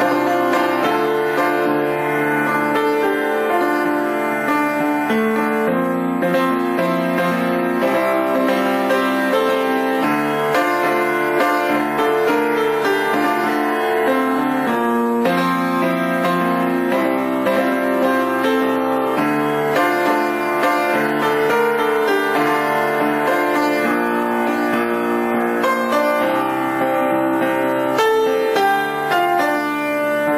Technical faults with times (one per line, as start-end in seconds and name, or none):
none